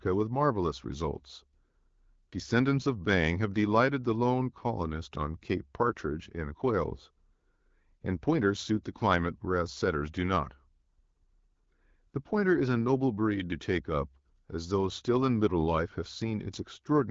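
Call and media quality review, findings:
No faults found; speech arrives over the AMR wideband (HD Voice) path at 12.65 kbit/s, with nothing above about 7.5 kHz, as expected for a wideband call.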